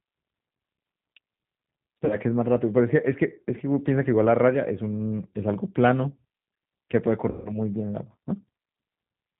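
Throughout, the speech sounds rough and slightly synthetic, with nothing above 4 kHz. This is plainly audible G.729 codec damage, consistent with 8 kbit/s.

At 2.05 to 2.16 s and 7.31 to 7.52 s, VoIP packet loss concealed by the speech codec smears the sound into a fading buzz or coloured noise. About 40 ms and 140 ms are missing. The voice stays weak briefly afterwards.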